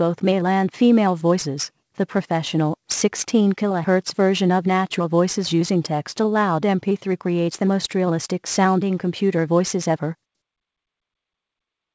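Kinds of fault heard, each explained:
Clock drift between sender and receiver: the sender's clock runs roughly 4 percent fast, so the jitter buffer keeps overfilling, leaving small timing hiccups at uneven intervals.
Repeated timing corrections: to keep pace with a sender running at 104 percent, the receiver trims short pieces from 0.07 to 11.77 s, heard as slight hiccups.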